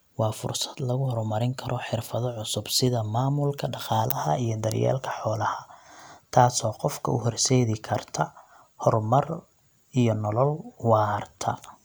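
No technical faults can be heard anywhere in the recording. The speech carries on steadily, with nothing in the signal that calls for comment.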